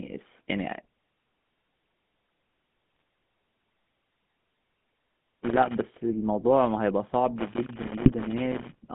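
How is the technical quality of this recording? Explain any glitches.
The recording is speech with clearly degraded technical quality: the whole clip carries phone-codec coloration, with two short decoder glitches and two stretches of contact crackle.

GSM full-rate codec: Throughout, the audio is confined to roughly 150 Hz to 3.5 kHz, which fits a 13 kbps phone link, and has a buzzy, gravelly edge. The coder rebuilds the voice from a vocal-tract filter driven by coarse pulse excitation. Unlike plain band-limiting, it adds roughness, not just dullness.

GSM bit errors: From 2.96 to 3.00 s and from 8.02 to 8.12 s, the sound breaks into brief squawks and gargling. Corrupted filter, pitch or gain parameters reach the decoder and distort whole frames. These errors deform the tone itself, which separates them from dropout gaps or clicks.

Loose connector crackle: From 4.09 to 5.87 s and from 7.38 to 8.83 s, irregular scratchy crackle sits over the sound. 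A bad contact rapidly makes and breaks, chopping the signal. The crackle is erratic and lasts seconds, unlike the compact squawks of bit errors.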